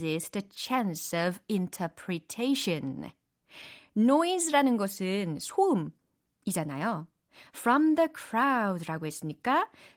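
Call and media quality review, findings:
Nothing stood out on listening to this speech clip, which comes through the Opus voice compression path at 24 kbps in hybrid fullband mode.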